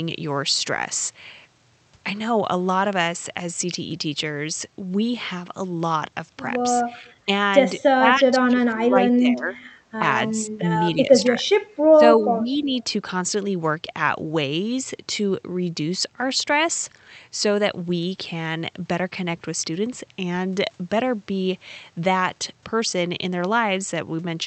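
Between about 7.0 and 12.7 s the talker keeps getting ducked in chunks, at 7.01, 7.87 to 8.97, 9.17, 9.98, 10.3, 11.26 to 12.02 and 12.21 s. Most dips are shallow, around 10 to 15 dB, but the ones at 7.87 and 11.26 s go down about 30 dB and nearly cut out. That's likely speech suppressed in double talk: with both ends talking at once, the echo canceller treated the near voice as echo and turned it down.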